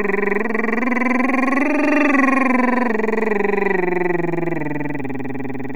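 DC offset runs throughout the clip: the whole music waveform sits shifted from zero by a constant of about -25 dBFS. It can't be heard as such. It eats into headroom and appears as steady energy at the very bottom of the spectrum.

A loud pop lands at 1.85 to 1.88 s. It is a single sharp pop, peaking a few decibels above the music, which carries on underneath. The likely cause is a brief voltage step or pulse, from a plug, switch, static or driver glitch, entering the signal path.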